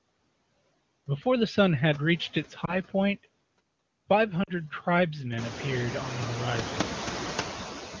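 Throughout the speech there are noise suppressor artifacts. The background is pushed down by about 20 dB between words and swells back under them, leaving a pumping residue rather than steady hiss. At 2.65–2.75 s and 4.43–4.52 s there are lost AMR speech frames. The decoder repeats the last good sound at falling gain, so the first is heard as a short dip or warble, while the second fades to near silence within its two frames. The first points to one missing frame, the second to two.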